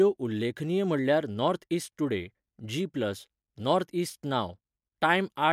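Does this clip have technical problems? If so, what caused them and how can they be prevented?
No, nothing in this speech recording points to a technical fault, so there is nothing to trace back or guard against.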